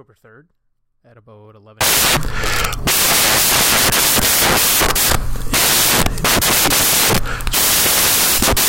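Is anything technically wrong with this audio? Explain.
Yes. From 1.81 s to the end, the samples are built from the wrong bytes: the reader misassembles each sample's bytes, whether offset by one, order-swapped or misaligned. The rapidly varying low bits become the dominant part of each value, so the speech is replaced by loud, harsh broadband noise.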